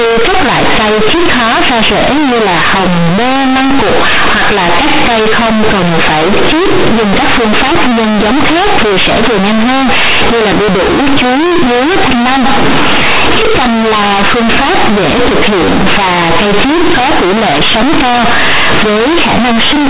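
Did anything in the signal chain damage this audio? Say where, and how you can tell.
Yes. Companded audio read as linear runs through the whole clip, at the sample-format conversion stage. The speech was encoded as mu-law, but the bytes are being played as plain linear 8-bit samples without expansion. Because the sign sits in the top bit of each mu-law byte, every sign change now swings across roughly half the output range. Quiet passages come out as loud as peaks, and the waveform is grossly bent, giving harsh buzzy distortion and heavy noise in the pauses.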